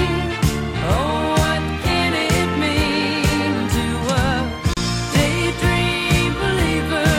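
At 4.74 s the sound drops out and returns at 4.77 s. This is a gap at a join of encoded pieces, about 33 ms of silence. Two separately encoded segments were butted together without trimming. The encoder's start-up delay and the padded final frame both survived the join. The silence breaks otherwise continuous sound, its edges smeared by the codec. Afterwards the sound resumes exactly where it left off.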